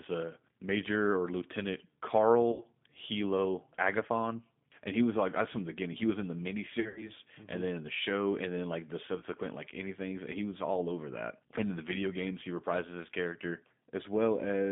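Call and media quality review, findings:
G.729 codec across the whole call: band-limited to roughly 150 Hz to 3.6 kHz, plainly rough and synthetic. It sounds like an 8 kbit/s CELP path rebuilding the voice from a filter, a pitch predictor and sparse pulses, so fine detail gets smeared.

VoIP packet loss concealed by the speech codec at 2.52 to 2.64 s (80 ms gone), at 6.80 to 7.10 s after "was in the miniseries" (120 ms lost in patches over 160 ms), and at 9.20 to 9.24 s between "and then like the" and "like anything" (20 ms). The decoder stretches the last sound into a buzzy tone or coloured noise that fades, and the voice stays weak for a moment after audio returns.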